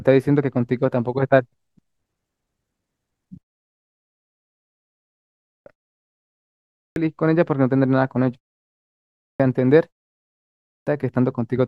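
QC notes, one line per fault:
4.37 to 10.87 s, clipped start after a pause: five times, at 4.37, 5.11, 6.36, 8.81 and 10.29 s, speech comes back out of silence with roughly 0.55 to 0.6 s of its opening missing, so words kick in abruptly, mid-sound. The output seems to doze off during the gaps, some as short as 0.37 s, and takes over half a second to wake back up.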